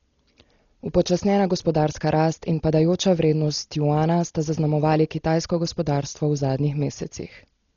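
From start to finish, the speech sounds dull, with nothing above 7 kHz. A rough, fluttering noise surrounds tonal parts. The damage is heavy and likely comes from Dolby Digital compression. The sound points to a starved bitrate near 32 kbps, where unfunded frequency lines are refilled with noise.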